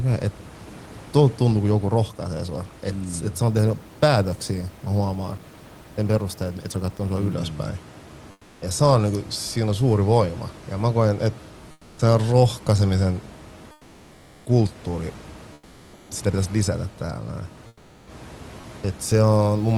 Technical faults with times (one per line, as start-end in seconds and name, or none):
8.31-8.61 comfort noise in place of the background
11.71-11.97 comfort noise in place of the background
13.71-14.45 comfort noise in place of the background
15.53-16.09 comfort noise in place of the background
17.67-18.07 comfort noise in place of the background